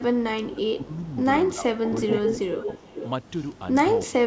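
From 0.0 to 1.05 s the speech dips by up to about 15 dB, then again at 1.54–2.09, 2.49–2.68 and 4.07–4.13 s, likely speech suppressed in double talk, with the canceller ducking its own talker along with the echo. There's also echo leak, likely from a loudspeaker path: a faint 331 ms delayed copy at 0.94–1.1 s, then a strong 423 ms one, about 5 dB down, at 1.83–3.08 s.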